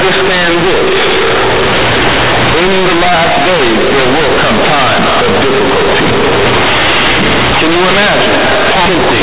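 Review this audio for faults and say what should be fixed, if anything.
Companded audio read as linear, present throughout: the A-law bytes are played as plain 8-bit samples without expansion, so each sign change swings the output across half its range, quiet speech matches loud peaks, and everything becomes harsh, buzzy distortion with heavy noise in pauses.

To prevent it, pass the stream through an A-law decoder, matching the G.711 format, before playback instead of treating the bytes as linear PCM.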